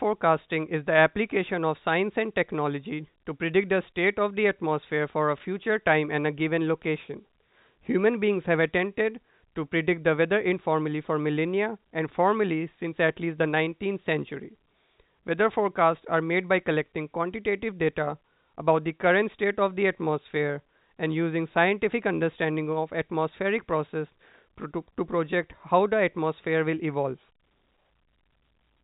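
No technical faults can be heard in this speech.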